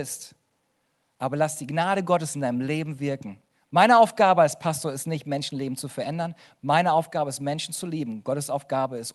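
Nothing goes wrong anywhere in this one; the speech just carries the everyday sound of a call line, with the highs easing off around 12 kHz in the way you'd expect from an Opus call at a fairly modest bitrate.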